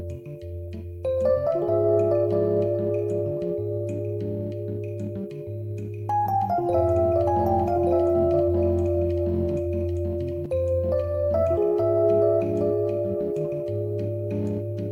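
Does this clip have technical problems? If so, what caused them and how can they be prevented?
Yes. A second, slower capture path likely mixed the audio in again, creating a doubled audio track from 6.70 to 10.46 s: an equally loud copy trailing about one second behind. Route each source through only one capture path, and check edits for overlapping duplicate copies.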